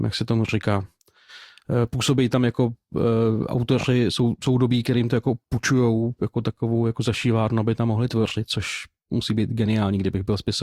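At 0.77 to 0.84 s the speech carries a corrupt frame decoded: flipped bits in the compressed stream were played anyway, so misread gains or codes put energy at wrong frequencies. The roughly 70 ms disturbance fits about three damaged frames, heard as a brief chirp or noise burst.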